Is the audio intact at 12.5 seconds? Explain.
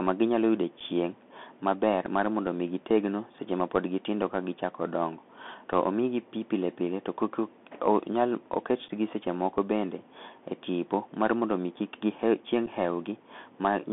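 No. At 12.47 s a single sharp tick cuts through the sound, broadband and with no connection to what is happening in the signal around it. This is a bit error spike: one flipped bit in a single sample pushed its value away by a power of two before it snapped straight back on the next sample. Because the jump lasts only one sample, it is heard as an instantaneous click rather than a burst.

That tick sits on top of damage that runs through the whole clip, the Bluetooth CVSD headset codec. The speech is confined to a narrow line from about 150 Hz up to 3.5 kHz, with a granular hiss underneath and scratchy, rough s sounds. CVSD encodes each sample as a single up-or-down bit with an adapting step size, which fits a 64 kbps headset link. Where the speech rises quickly, the step cannot keep up and the waveform distorts, and the coarse stepping leaves that steady grain under everything, including the moment around 12.5 s.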